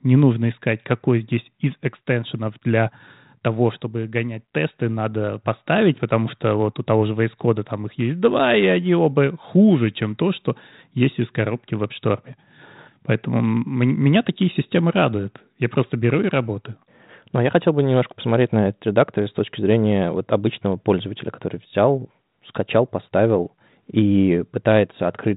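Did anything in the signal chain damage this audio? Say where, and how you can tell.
No, nothing damaged this audio.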